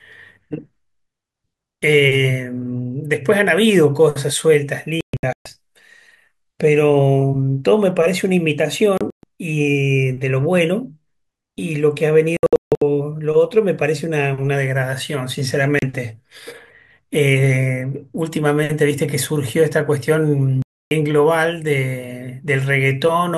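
Digital broadcast dropouts mute the speech at 5.01–5.46, 8.98–9.24, 12.37–12.82, 15.79–15.83 and 20.62–20.92 s. Corrupted frames were lost, leaving short silent holes.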